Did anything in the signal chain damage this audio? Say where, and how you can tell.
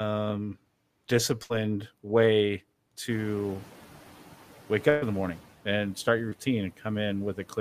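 Yes. Burst of packet loss, in the network stage, at 1.43 to 1.52 s and 4.90 to 5.04 s. About 60 ms and then 120 ms of audio went missing. Each time the receiver stretched the last sound into a decaying buzz or hiss, then jumped ahead, so that stretch of audio is simply gone.

Noise suppressor catching up, in call processing, from 3.09 to 5.43 s. The room noise jumps by about 17 dB around 3 s. The suppressor's estimate trails it, letting the noise through at first and then pulling it down by about 8 dB over roughly 2.3 s, just before "and start your".

Short concealed packet loss, in the network stage, at 6.30 to 6.33 s, right after "and start your". About 20 ms never arrived in time. The decoder patched it by extrapolating the preceding sound and crossfading back, which you hear as a brief smear or wobble.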